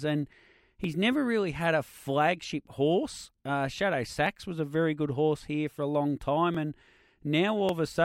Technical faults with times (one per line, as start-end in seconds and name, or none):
0.84-7.69 clock drift buffer slips